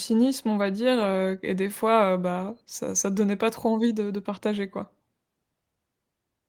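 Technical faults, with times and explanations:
No technical faults can be heard anywhere in the speech recording, with the signal holding steady and continuous throughout.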